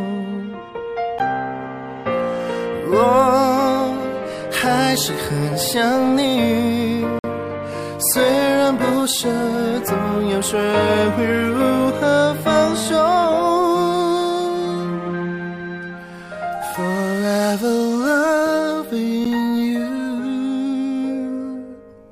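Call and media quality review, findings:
Gap between stream segments at 1.19 s, 7.19–7.24 s and 19.25 s. Hard-edged silent holes of about 13 ms, 51 ms and 10 ms. Probable component: segmenter or packager timestamps. Adjacent segments don't meet on the timeline, so the player pads the difference with silence. Spacing fits a 6-second segment length. Nothing is dropped, but each hole adds time and pushes later audio back.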